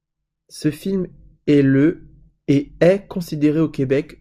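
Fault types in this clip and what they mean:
No fault types are present in this clip, so there is nothing to list or explain.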